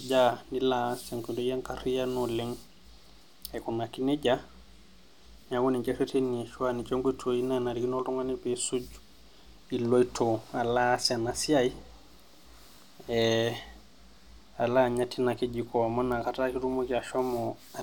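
Speech clip carrying three bit error spikes, at 13.22 s, 16.12 s and 17.19 s. Each is a single-sample jump, peaking at about -22 dBFS for the first two and about -28 dBFS for the last, heard as a short, bright tick with energy spread across the whole spectrum and no relation to the speech around it. A flipped bit in memory or on a digital link throws one sample off by a power of two before the waveform returns to normal.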